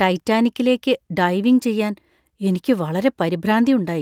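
Nothing stands out as a technical fault anywhere in this bit of speech, so there's nothing to point to along the way.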